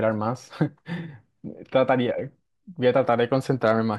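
At 3.13 s a speech peak brushes the ceiling in a brief hard clipping tick, then from 3.66 to 3.71 s the level runs about 2 dB past what the stage can pass, so the peaks are sliced flat into a short crackle. Unlike a rounded soft saturation, the flat tops produce crisp high harmonics.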